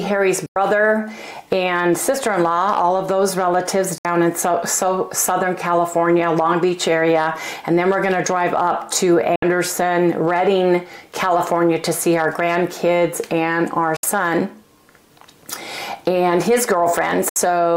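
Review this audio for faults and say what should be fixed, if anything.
Digital broadcast dropouts cut the sound at 0.46, 3.98, 9.36, 13.96 and 17.29 s. Each gap fades out in about 3 ms. The first lasts 96 ms, the rest 64 ms, which fits whole lost frames. The receiver muted until good frames returned. Improve reception or antenna placement to prevent it.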